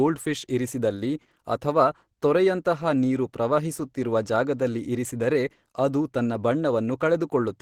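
Throughout the recording, the speech was likely squeezed through Opus compression at a very low rate, around 16 kbps, where the encoder appears to fall back to its hybrid speech mode instead of the music-oriented coding. Too few bits remain to describe the upper bands faithfully, so they are filled in approximately. The damage is plainly audible from start to finish: the speech sounds muffled and hoarse, with a rough, grainy texture in place of clean detail.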